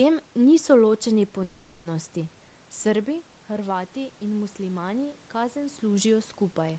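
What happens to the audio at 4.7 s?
At 4.7 s the sound is partway through an automatic gain rise that runs from 2.90 to 5.87 s. The input dropped by about 9 dB when the talker moved back around 3 s, so the gain control raised its gain step by step, by about 4 dB in all. Unlike a talker simply coming closer, the room noise swells along with the voice, and the change creeps in over nearly three seconds rather than all at once.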